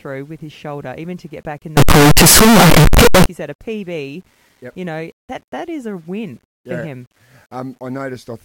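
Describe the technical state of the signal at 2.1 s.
At 2.1 s the speech is caught in a stretch of very loud, harsh distortion. It runs from 1.77 to 3.26 s, between "to get back in" and "you said a". The likely cause is signed and unsigned mixed up in the 8-bit samples. The flipped top bit turns each zero crossing into a full-range jump, so quiet moments blare as loudly as the rest.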